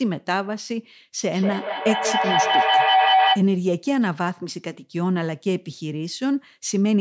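From 1.21 to 3.5 s a feedback howl builds: the call's audio loops from loudspeaker back into a microphone, gaining level each trip until a tone near 700 Hz rises to about 4 dB above the speech, the loop repeating roughly every fifth of a second. Unlike echo, the repeats grow rather than fade.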